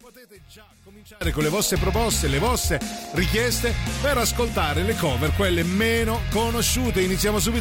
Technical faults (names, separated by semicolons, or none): one channel inverted; train of clicks